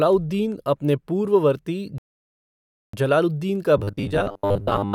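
A rebuffering stall runs from 1.98 s to 2.93 s. The speech drops into silence for about 0.95 s, then picks up exactly where it broke off, with nothing missing. The player ran short of downloaded audio and had to wait for the next portion to arrive. The gap adds time to the clip without losing any speech, so it sounds like a sudden freeze followed by a clean restart.

Robotic sound from repeated short buffers begins at 3.77 s and lasts until the clip ends at 4.94 s. The speech turns into a stiff, metallic buzz pitched at 100 Hz. It still roughly tracks the rise and fall of the speech, but it loses its natural inflection. The likely cause is audio arriving too slowly, so the software kept replaying the last 10 ms fragment. Most of the real audio in that stretch is skipped.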